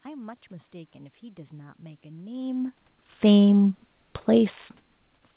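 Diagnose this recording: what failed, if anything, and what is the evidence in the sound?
Nothing failed here: the speech carries no content above 4 kHz, which fits a narrowband call codec such as G.711, there's some room noise in the background, and the level shift around 2 s is just the talker moving relative to the microphone.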